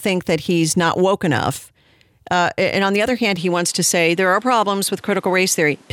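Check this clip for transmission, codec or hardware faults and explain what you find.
One fault is present: an input switched to a poorer device. At 3.37 s the speech changes character and stays that way to the end. From that point nothing is passed above 13 kHz, so the top air goes and the voice turns duller. A new background noise floor appears, roughly 35 dB below the signal. The switch is seamless, with no gap and no obvious level jump. A narrower band, a fresh noise bed and an unchanged level together point to the likely cause: the system moving to a different, lower-grade microphone mid-recording.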